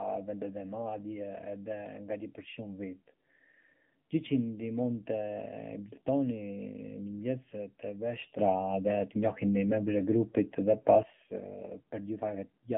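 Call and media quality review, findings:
Muffled, boxy speech with a buzzy, synthetic edge across the whole clip; no air or sibilant detail above about 3.6 kHz, thin low end below 150 Hz. Probable component: AMR narrowband mobile codec (AMR-NB) on a 150 Hz to 3.4 kHz phone line. Mechanism: 8 kHz sampling removes the top band. A vocal-tract model excited by sparse pulses rebuilds the voice, and the audible coarseness points to a low mode near 7.4 kbps.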